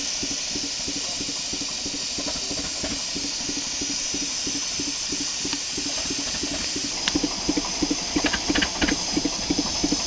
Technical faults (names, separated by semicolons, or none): none